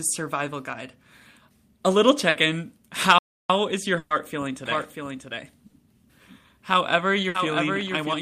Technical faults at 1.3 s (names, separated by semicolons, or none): none